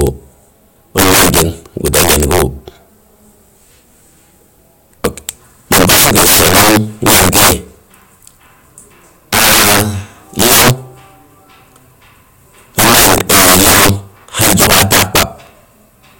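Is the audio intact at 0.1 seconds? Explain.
No. At 0.1 s the speech carries integer overflow, present throughout: a gain pushed about 22 dB too hot lets roughly 7 percent of samples exceed the integer limit and wrap to the opposite sign. Loud peaks give violent cracks, far harsher than clipping's flattened buzz.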